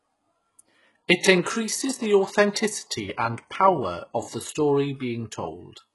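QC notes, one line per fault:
Throughout, HE-AAC compression: gritty, lispy s sounds and hard, metallic treble cut off above 11.5 kHz, likely copied-up replicated highs from a bitrate near 12 kbps.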